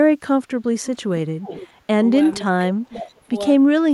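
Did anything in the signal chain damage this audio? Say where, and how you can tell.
Yes, call processing. From 1.18 to 1.70 s and 2.45 to 3.32 s the speech dips by about 25 dB, likely speech suppressed in double talk by the echo canceller.

Also call processing: faint echo leak near 1.54 to 1.66 s and 2.40 s, a copy delayed 514 ms at about 20 to 25 dB down, likely uncancelled loudspeaker pickup.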